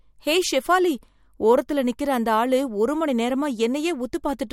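From 0.25 s to 4.5 s the speech carries faint clock slip clicks, about ten small ticks spaced roughly half a second apart. The likely cause is two devices running on separate, unsynchronised clocks about 40 ppm apart, so a single sample is dropped or repeated each time the drift adds up to one sample. A spectrogram would show thin, evenly spaced vertical broadband lines. The waveform would show a tiny one-sample step at each tick.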